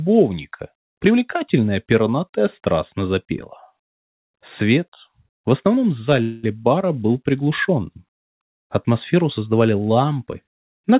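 At 6.22 s a call audio freeze holds the sound for about 0.21 s, until 6.45 s. The last sound continues as a fading buzz, likely because the jitter buffer ran empty, and then the audio resumes with nothing lost, just later. On a spectrogram, beneath the codec's 4 kHz ceiling, the band smears into flat streaks. The waveform shows a repetitive, decaying stretch.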